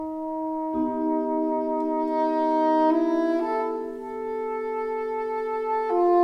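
Nothing stood out on listening to this clip.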